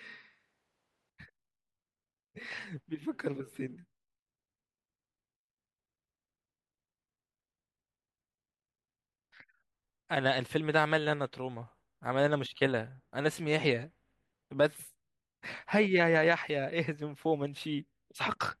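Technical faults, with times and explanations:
0 to 1.1 s, switch to a distant microphone: the speech is already roomy and hollow when the clip opens, thin in the bass, roughly 5 dB quieter, with room noise only about 30 dB under it, then snaps close. Likely a far-off camera mic standing in.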